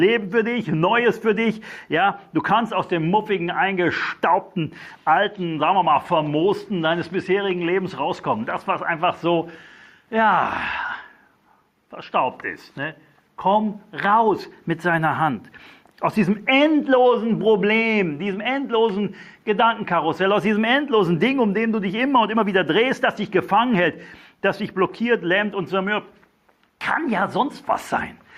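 Gain pumping runs through the whole clip, with a gain swing of roughly 5 dB: loud and soft parts end up closer in level, and the sound is squashed. The likely cause is input gain set far too high, with a fast limiter or compressor clamping down on every peak. Pumping sets it apart from a noise gate, which would cut the background off in the gaps rather than lift it.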